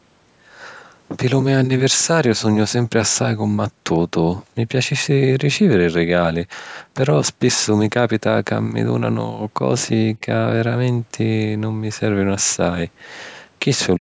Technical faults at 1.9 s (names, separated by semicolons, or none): none